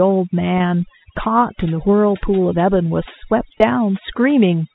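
Overdone noise removal runs through the whole speech clip. The noise reduction was set too hard. Any frequency band close to its noise estimate gets pushed far down or cut out. Quiet parts of the voice are caught too. Between phrases the background drops, with small twinkling specks left behind.

At about 3.59 s there is packet loss with pitch repetition. About 20 ms of audio is missing, which fits a single lost packet. The receiver filled the gap by repeating the last pitch period and fading it down. Because the loss is short, it comes across as a brief held, buzzy tone before the speech carries on. The G.711 telephone path cuts everything above 4 kHz here, as everywhere, but that is not part of this fault.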